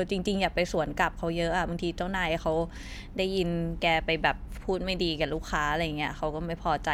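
Nothing in the recording stood out as a technical problem on listening.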